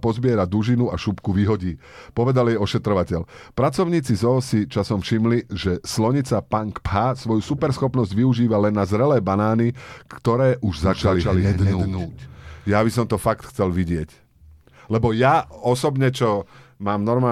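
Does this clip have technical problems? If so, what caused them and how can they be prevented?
Yes: from 10.82 to 12.76 s a doubled audio track appears, a full-band copy about a fifth of a second behind and somewhat quieter, likely from a second capture path. Unlike room echo, it has no decay or colouring and stops abruptly. Prevent it by routing the source through a single capture path and muting any duplicate inputs or monitoring loops.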